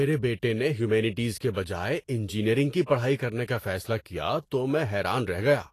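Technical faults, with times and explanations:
Throughout: Vorbis compression. The speech sounds hissy and grainy, with nothing above 14.2 kHz. That is likely from a Vorbis encode at a low rate, which fits about 36 kbps. Coarse treble quantisation turns fine detail into noise, giving grainy treble noise rather than the metallic warble of a badly fitted floor.
2.86–2.89 s: pre-echo. A hiss leads a sharp onset by about 36 ms, and the attack itself sounds softened. The codec spreads noise evenly across its transform block, so noise sized for the loud onset leaks into the quiet gap just before it. Unlike a click or dropout, it comes ahead of the event.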